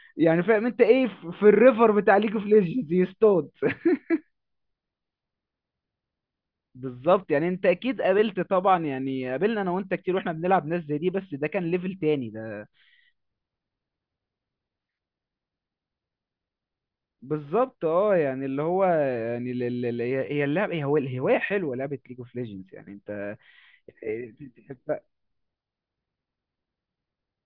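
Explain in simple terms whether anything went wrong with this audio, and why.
Nothing went wrong here: the recording runs along steadily the whole way, with no dropouts, glitches or other trouble to point to at any moment.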